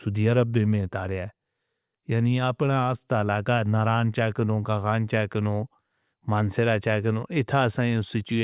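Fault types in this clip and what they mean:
No faults found in the speech recording; nothing to report.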